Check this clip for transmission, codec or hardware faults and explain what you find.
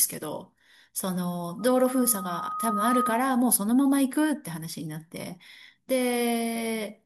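One hardware fault. From 1.59 to 3.26 s, loudspeaker feedback squeal: the microphone re-amplifies its own loudspeaker output, so a 1.2 kHz tone swells over about a second and a half to roughly 5 dB above the speech. A spectrogram shows a bright horizontal line at 1.2 kHz.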